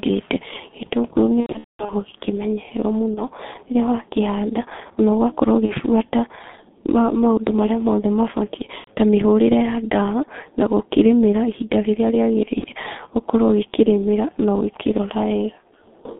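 G.723.1 codec damage runs through the whole speech clip: the sound is confined to roughly 200 Hz to 3.6 kHz, giving a muffled, boxy tone, and the heavy coding leaves it hoarse with smeared consonants. This points to the 6.3 kbit/s mode. The codec rebuilds each 30 ms stretch from a coarse vocal-tract model that changes only slowly, so quick transitions blur together.

VoIP packet loss concealed by the speech codec first hits from 1.40 to 1.94 s, where about 360 ms of audio is missing, scattered across 480 ms with the longest gap around 210 ms. The decoder fills the holes by repeating its last pitch and filter at falling gain, so the sound is stretched and fades, and recovers only weakly afterwards. Shorter concealed gaps follow: 3.14 to 3.26 s, then 5.66 to 5.72 s just after "wakĩhanda na", then about 90 ms from 8.78 to 8.89 s just before "ta mĩhũrĩre", and finally 12.59 to 12.65 s between "rĩmĩra ihinda rĩrĩa" and "ũkorwo ũgĩkĩrĩmĩra". 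Each of these is a brief smear and a dip in level.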